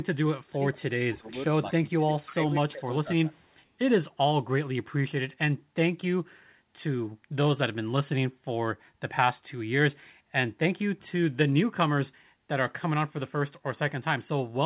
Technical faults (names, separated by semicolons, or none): speech suppressed in double talk; echo leak